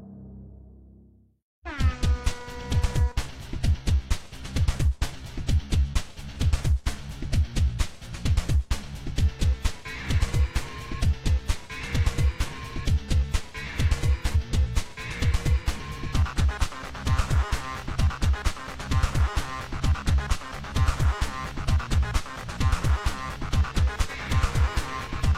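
There are three short glitches from damaged data in a compressed stream: a blip at 4.37 s, then 14.31 to 14.36 s and 24.06 to 24.11 s. Corrupted bytes trip the decoder, which loses sync and hunts for the next valid frame header, so the sound briefly glitches.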